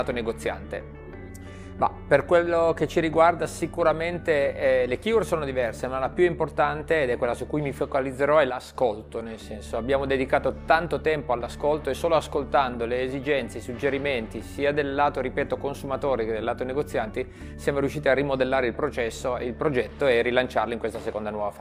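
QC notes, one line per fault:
8.50–8.75 s, one channel drops out: the level falls abruptly by about 6 dB for a quarter second. One stereo channel was likely lost before the mono sum.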